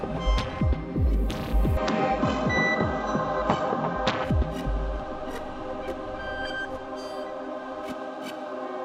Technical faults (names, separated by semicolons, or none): input switched to a poorer device